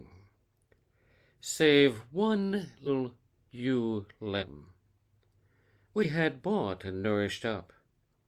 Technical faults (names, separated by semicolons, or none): compressed frames skipped